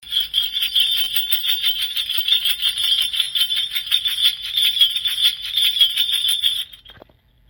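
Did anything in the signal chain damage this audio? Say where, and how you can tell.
Yes. At 1.04–1.07 s and again at 3.23–3.26 s there is a brief buzz, the sound of a repeated buffer at the driver or buffer stage. A 10 ms block plays three extra times when fresh audio arrives late, and the hard joins create the buzz. The loop is too short to hear as a replay.

From 4.95 to 5.95 s the audio replays about a second it has just played, with a small blip at the jump back. This is a stream segment repeated at the playback stage, where the player queued the same segment twice. It differs from the buffer stutters because a full second of audio is heard again rather than a fused buzz.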